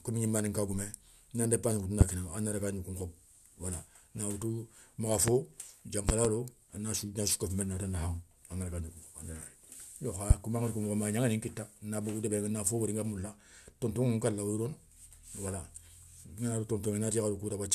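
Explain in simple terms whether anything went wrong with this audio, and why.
Loud pops break into the speech four times: just after "na ndépassi ŋoutou" at 2.01 to 2.04 s, at 5.28 to 5.31 s, as a quick double pop from 6.09 to 6.28 s before "a na sou nasou", and at 10.31 to 10.33 s before "koma angada ko mokho". Each is a sharp thump laid on top while the speech carries on underneath, unlike a dropout, where the sound itself cuts out. The likely cause is a sudden electrical jolt, such as a plug, switch or static discharge.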